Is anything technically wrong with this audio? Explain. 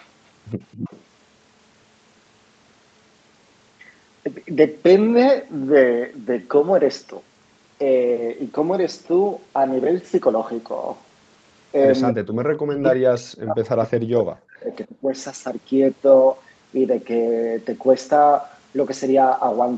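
Yes, there are two problems in this speech clip. First, echo leak: at 0.0, from 0.71 to 1.02 s and around 12.1 s, a delayed copy of the voice trails by about 267 ms, very quiet at first and louder later. The likely cause is a far-end echo canceller letting loudspeaker pickup slip back. Second, speech suppressed in double talk: from 12.12 to 12.41 s and 12.58 to 15.12 s, the voice drops by as much as about 40 dB and breaks up, which likely means the canceller ducked everything while both sides talked at once.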